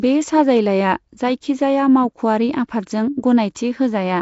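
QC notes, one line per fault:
Throughout: Nellymoser compression, likely from the old Flash Asao microphone codec at about 32 kbps. Short fixed-size blocks coded at two bits per sample starve weak bands, which get filled with noise, giving the speech a rough, hissy halo and a smeared, underwater quality; nothing is present above 7.7 kHz.
3.55 s: pre-echo, a brief hiss of about 12 ms ahead of a sharp attack. The codec spreads quantisation noise across the whole block, so noise sized for the loud onset leaks into the quiet moment before it, softening and smearing the attack.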